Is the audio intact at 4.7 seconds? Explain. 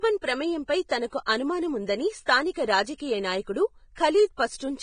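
No, at 4.7 seconds the speech is hissy and grainy, with nothing above 9.7 kHz, and that holds for the whole clip. It's likely Vorbis compression at a low bitrate, maybe around 23 kbps, where the treble is quantised so coarsely that its detail turns to noise and the attacks blur.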